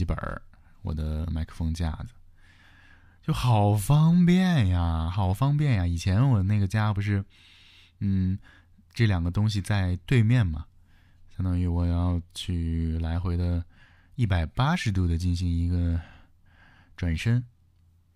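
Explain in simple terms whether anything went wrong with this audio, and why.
Nothing went wrong with this audio, because no fault can be heard anywhere in the recording.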